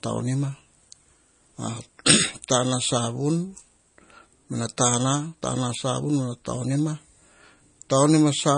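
From start to finish the speech carries plainly audible codec damage. The likely cause is MP3 compression at a low bitrate, fitting something near 32 kbps. The top end stops dead, with nothing above 9.8 kHz. The encoder ran short of bits, so it removed the treble and dropped weaker frequency detail. That detail comes and goes between frames. The result is a dull, watery quality through the whole clip.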